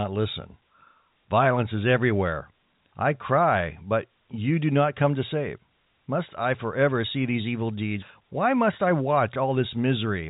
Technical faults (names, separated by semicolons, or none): none